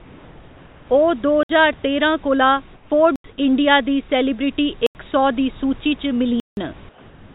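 From the start to 0.89 s the background is a smooth, featureless hiss, about 2 dB quieter than the room noise it stands in for. This is comfort noise in place of the background: during the pause the sender likely stopped transmitting, and the receiver filled the gap with synthetic noise that only roughly matches the real room tone.

At 1.43–1.49 s the sound drops into a hard hole of about 62 ms. This is a block of digital silence, where a stretch of output was zeros, likely because the buffer was not filled in time.

From 2.75 to 2.90 s the same flat comfort noise briefly replaces the background, this time about 4 dB down.

Two more blocks of digital silence follow, each about 85 ms long, at 3.16–3.24 s and 4.86–4.95 s. Their length fits a 4096-sample buffer going unfilled.

At 6.40–6.57 s a longer hole of about 171 ms fits two such blocks missed in a row.

From 6.89 s to the end, comfort noise takes over again, about 3 dB below the real background. 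Like the rest of the clip, it sits inside the narrow call band, with nothing above 4 kHz.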